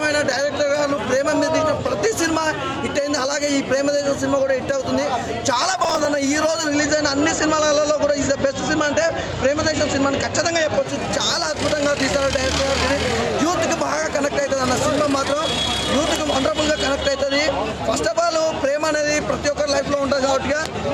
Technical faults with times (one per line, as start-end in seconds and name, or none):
5.74-6.05 processor overload crackle
6.49-11.05 digital radio blending to analogue